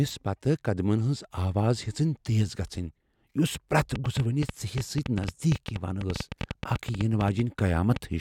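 From 3.96 s to 7.97 s a train of clicks runs over the speech: some forty near-identical pops at an uneven pace of about 8.5 per second, peaking around 10 dB above the voice. The likely cause is electrical interference or a faulty connection or power supply, injecting pulses rather than dropping audio.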